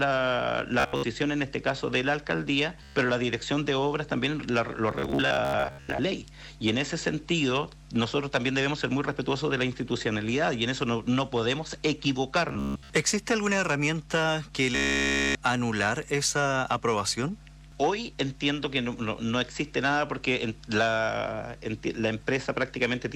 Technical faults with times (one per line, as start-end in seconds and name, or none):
0.80-1.03 Bluetooth stutter
2.83-2.96 Bluetooth stutter
4.91-5.99 Bluetooth stutter
12.49-12.90 Bluetooth stutter
14.75-15.35 Bluetooth stutter